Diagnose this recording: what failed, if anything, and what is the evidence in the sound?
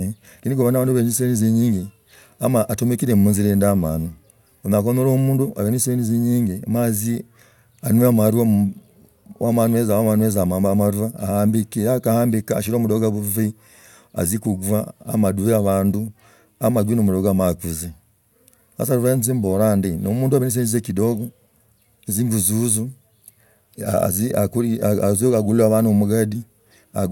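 Nothing failed: the sound of this speech recording gives no evidence of a fault at any stage.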